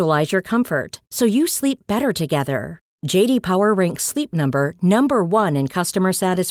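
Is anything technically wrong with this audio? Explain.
No, nothing in this speech recording points to a technical fault.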